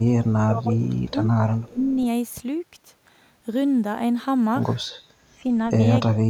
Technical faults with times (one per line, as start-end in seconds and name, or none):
0.07-1.20 speech suppressed in double talk
0.97-1.11 echo leak
1.60-1.71 echo leak
1.70-2.00 speech suppressed in double talk
5.43-5.52 speech suppressed in double talk
6.16-6.30 speech suppressed in double talk